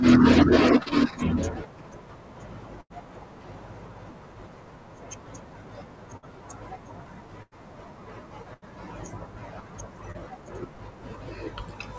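At 0.83 s there's a short concealed packet loss: roughly 30 ms never arrived, and the receiver papered over it by stretching the last bit of sound, leaving a quick smear. Then come bursts of packet loss at 2.81, 6.17, 7.42 and 8.53 s, each losing 60 to 90 ms. The decoder holds and fades the previous sound into a buzz or hiss before jumping ahead, so that stretch of speech is simply gone. At 10.12 s there's another short concealed loss, another brief smear of about 30 ms. All of this sits on a wideband call codec path with nothing above 8 kHz.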